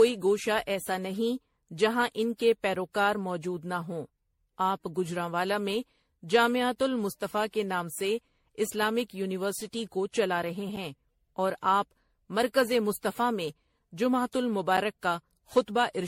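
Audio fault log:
Throughout: generation loss. The speech has a swirly, hollow, smeared quality, with blurred consonant attacks and nothing above about 16.5 kHz, likely from re-encoding at MP3 64 kbit/s around fifteen times, each pass re-quantising on a shifted frame grid so the damage piles up.
2.75, 6.76, 10.76, 14.77 s: gap between chunks. Four holes of about 7 ms each, spaced about 4 s apart, so the audio seems to come in 4-second chunks with a bit of silence wedged in at each join, probably padding or a late chunk start.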